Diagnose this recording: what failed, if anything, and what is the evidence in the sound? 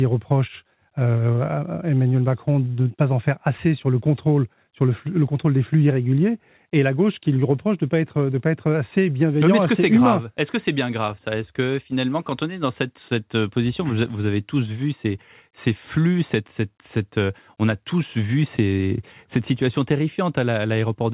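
Nothing in the recording points to a failure at any stage. The speech carries nothing above 4 kHz, the narrowband ceiling of a working call path, which fits a G.711 mu-law link at 64 kbps.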